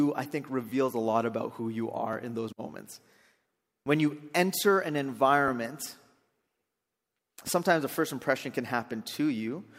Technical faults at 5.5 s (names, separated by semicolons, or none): repeated buffer